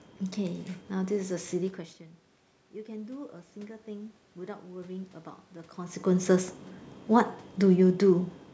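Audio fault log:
0.13 to 8.33 s, clock slip clicks. Faint, regular ticks recur about every fifth of a second, around forty in all. Each tick is a single sample dropped or repeated. This likely comes from two devices running on separate clocks that drift apart by roughly 100 parts per million. The error builds until it reaches a whole sample, then slips. The ticks stand out most on loud, sustained speech and disappear in pauses.
1.98 to 5.19 s, automatic gain rising. The level swells slowly, by about 5 dB over roughly three seconds. The room's background noise rises along with the speech. The input had dropped by about 18 dB, which fits the talker moving away from the microphone near 1.5 s. The gain control heard a quiet signal and raised its gain gradually. It recovered only part of the drop, so the speech returns partly and slowly.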